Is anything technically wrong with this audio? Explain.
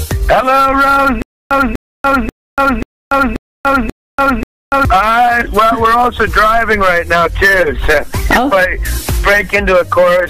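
Yes. A stutter with silent gaps runs from 1.22 s to 4.85 s. The same 247 ms burst of sound plays seven times at a steady 535 ms period, each followed by about 289 ms of dead digital silence. The playback or stream likely stalled and, on each retry, replayed its last buffered fragment before running dry again. Whatever audio belonged in that stretch never plays.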